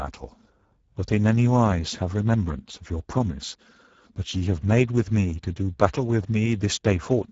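Speex codec damage runs through the whole speech clip. Too few bits for the CELP excitation leave the speech plainly noisy and hoarse, a level that fits a rate near 10 kbps, and nothing reaches past 7.7 kHz.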